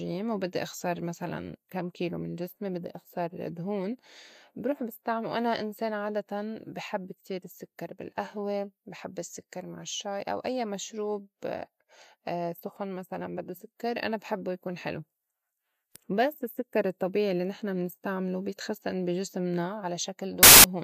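At 20.43 s, just before the end, a burst of harsh static runs to 20.64 s, about 0.21 s long. The fault is file tags played as audio: an embedded cover picture, stored as compressed data, was decoded as if it were samples. Compressed bytes are close to random, so they come out as very loud white noise. The waveform shows a solid block with vertical edges, and the spectrogram shows an even wash filling every frequency band.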